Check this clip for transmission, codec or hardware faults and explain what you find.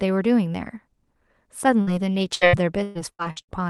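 Two transmission faults are audible, both from packets failing to reach the receiver in time.

From 1.81 to 1.90 s there is a burst of packet loss. When the stream stopped arriving, the receiver extended the last stretch of speech for about 55 ms, fading it as it went, and then jumped ahead, so roughly 60 ms of speech is simply gone. It sounds like a brief held sound that fades, followed by a small skip. Unlike a dropout to silence, the gap is filled with stretched sound rather than left empty.

From 2.35 to 3.51 s there is repeated packet loss, giving a robotic sound. Six separate gaps fall within this span, the longest lasting 118 ms, and each is patched by continuing the preceding sound. Concealment covers about 35% of the stretch, and roughly 420 ms of speech is missing overall. The result is choppy speech with pieces missing. What separates it from the single burst is the recurrence: holes keep returning before the voice can settle.

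Throughout, the call codec's band limit around 12 kHz can be heard, which fits Opus at about 32 kbps.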